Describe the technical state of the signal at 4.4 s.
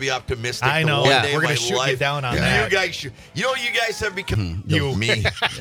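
A CD skip at 4.34 s: the laser jumps tracks, muting for a few milliseconds as a tick, then resuming elsewhere, shown as a brief waveform gap and abrupt spectral discontinuity.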